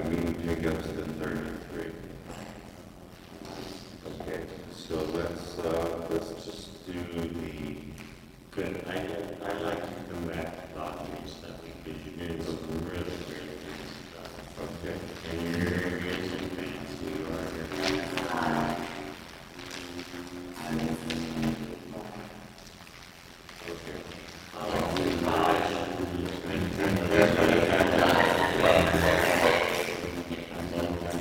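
A block size mismatch (padded) runs throughout: zero gaps fill each block, giving an 86.1 Hz buzz, consistent with 512-sample reads, and the audio plays at 0.625 speed, timbre unchanged.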